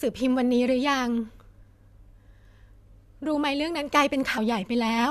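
At 4.37 s the speech breaks into a brief glitch, from damaged data in the compressed stream: corrupted bytes made the decoder misread frames and lose sync.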